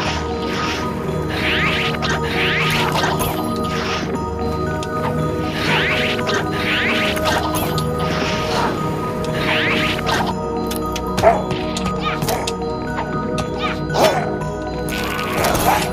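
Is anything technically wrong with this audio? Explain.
No, nothing stood out as technically wrong on listening.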